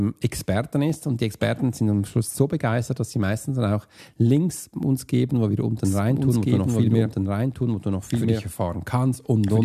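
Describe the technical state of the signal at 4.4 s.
At 4.37 s there's a single sharp click in the speech, most likely from dropped samples: a tiny fraction of a millisecond goes missing, so the waveform jumps straight to a later value. Nothing audible is lost, but that step shows as a thin vertical line across the spectrum.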